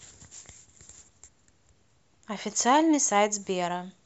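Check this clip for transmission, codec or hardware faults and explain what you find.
No faults turned up when I checked the clip.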